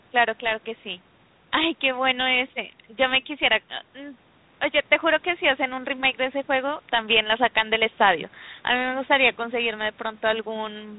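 Nothing stood out on listening to this speech, which carries the narrow, band-limited sound of a telephone line.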